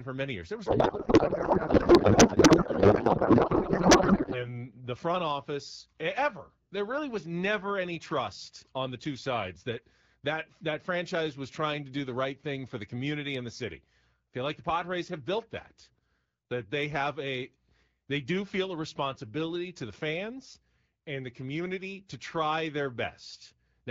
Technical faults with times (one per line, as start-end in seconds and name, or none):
0.65-4.63 codec payload misread